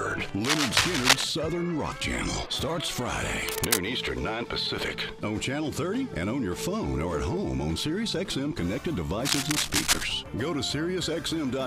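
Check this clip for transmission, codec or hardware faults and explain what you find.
There's a hardware fault: cable scratch noise, from 0.44 to 1.25 s, 3.48 to 3.79 s and 9.25 to 10.04 s. Ragged scratchy bursts sit roughly level with the sound, a little above it in the first, likely from a worn connector shifting contact.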